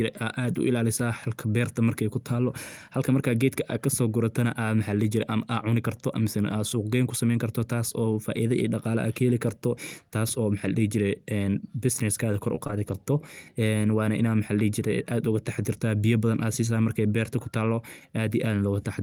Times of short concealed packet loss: 12.55-12.71

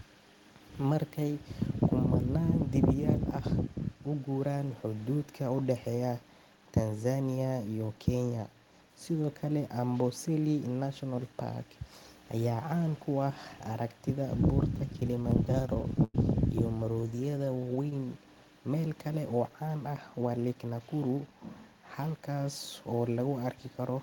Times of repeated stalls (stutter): 14.78-16.15, 16.78-18.19

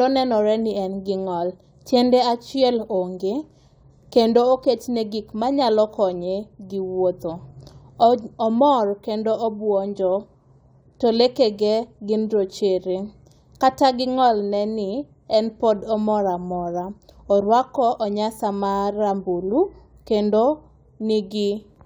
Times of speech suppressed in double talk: none

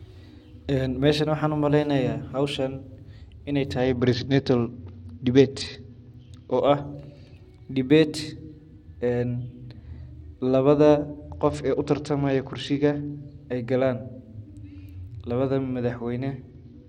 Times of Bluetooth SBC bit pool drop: 3.80-6.61, 11.30-13.10, 16.50-16.88

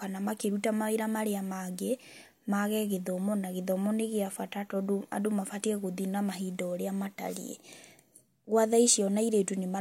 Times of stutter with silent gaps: none

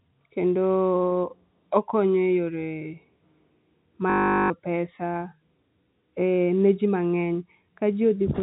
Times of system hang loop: 4.10-4.50

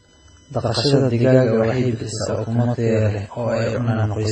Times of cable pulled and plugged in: none

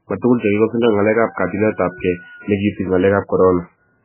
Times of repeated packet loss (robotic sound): none

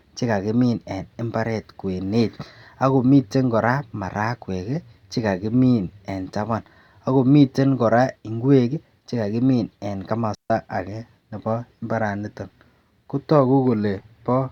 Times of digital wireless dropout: 10.35-10.50

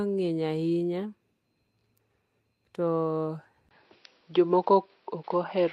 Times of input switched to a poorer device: 3.69-5.72

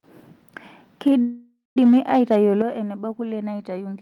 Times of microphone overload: 1.07-2.62

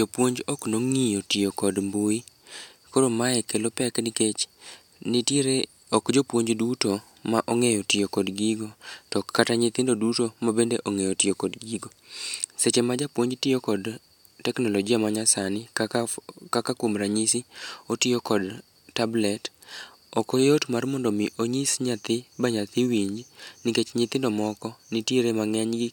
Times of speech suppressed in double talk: none

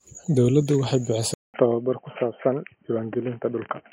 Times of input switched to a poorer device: 1.34-3.93

